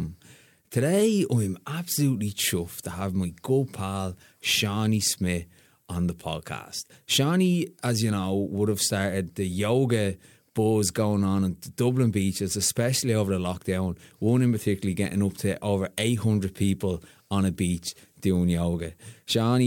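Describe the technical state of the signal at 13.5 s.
The signal at 13.5 s is intact, with no audible fault in the speech at that point.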